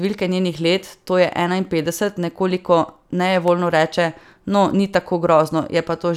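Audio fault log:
3.24–3.48 s, CD scratch ticks: three brief ticks, the longest well under a millisecond, evenly spaced as one blemish passes the laser once per disc revolution. Each pass wipes out more data than error correction can rebuild, so the player interpolates or mutes those few samples, producing a small click. On a spectrogram, three thin vertical broadband lines; on the waveform, tiny notches or flattened spots at matching intervals.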